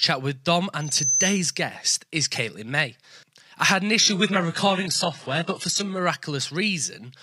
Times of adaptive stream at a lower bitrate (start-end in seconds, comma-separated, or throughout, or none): 4.00-6.00